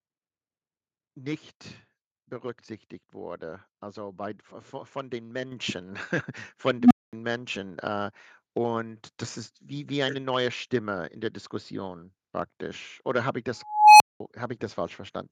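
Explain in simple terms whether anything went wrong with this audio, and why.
At 5.52 s the microphone volume stepped up: the call software raised the input level in one jump, making speech and background suddenly louder together.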